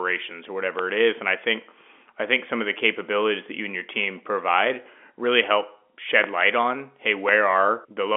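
A loud pop at 0.79–0.81 s before "it is", a double pop at 6.24–6.43 s before "on hey", and another at 7.29–7.31 s after it, reach about 15–20 dB above the speech. Likely voltage glitches, they show as vertical full-band spectrogram streaks and tall waveform spikes over the 4 kHz-capped G.711 telephone band.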